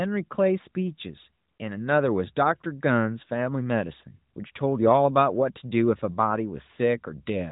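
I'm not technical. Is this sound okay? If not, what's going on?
Yes, nothing here sounds wrong to me.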